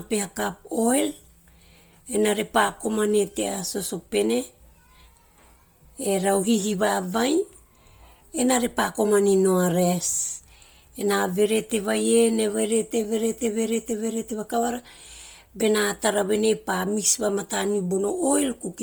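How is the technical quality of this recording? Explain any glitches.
The recording carries Bluetooth LC3 compression damage all the way through. The speech has a breathy, grainy edge where the upper spectrum has been dropped and refilled with noise, likely from LC3 at a low bitrate, roughly 32 kbps with 10 ms frames, which explains the heavy smearing of detail.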